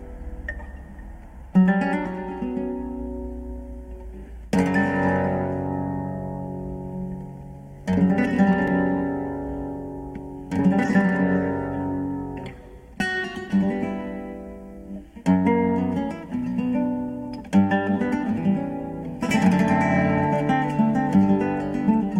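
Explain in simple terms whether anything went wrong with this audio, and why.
A block of digital silence at 8.68 s: for under 3 ms the sound drops to silence and snaps back, heard as a tiny tick. The playback program likely failed to fill its output buffer in time; the gap fits a 128-sample buffer.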